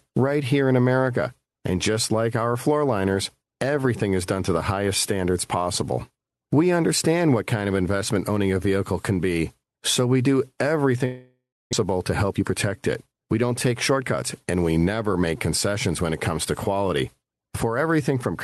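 From 11.05 to 11.75 s the speech breaks into what is likely a long network dropout. The last sound is stretched into a buzzy continuation that fades, then about 280 ms of near-silence follows. When audio resumes, roughly 400 ms of speech is gone rather than delayed. That skip is what separates it from a short packet loss, where concealment bridges the gap smoothly and nothing audible goes missing.

From 11.84 to 14.52 s, up to just before "we never make concessions", a jitter buffer speed-up follows. Audio that piled up after the stall is drained by cutting out tiny pitch-period slices, about 300 ms in total. The speech runs at 109% with its pitch unchanged, so it sounds hurried rather than chipmunk-like. That steady pitch is what distinguishes it from a simple resampling error. Throughout, the Opus call path caps the top end near 12 kHz.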